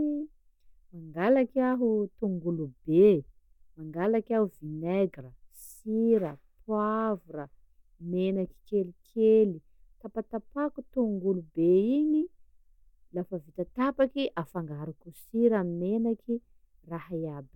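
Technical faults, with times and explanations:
No technical faults are audible anywhere in the speech recording.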